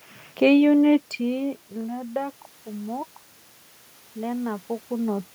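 No technical faults can be heard in this recording.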